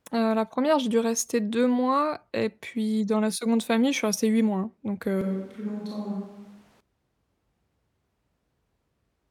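Right after "mois donc", at 5.21 s, the speech abruptly turns roomy and hollow, loses its low end and drops by roughly 5 dB, while background noise rises to around 30 dB below the speech. At 6.81 s it snaps back to the close, full sound. This is a switch to a distant microphone, likely because the close mic's signal dropped out for that stretch and a farther pickup, such as a camera mic, filled the gap.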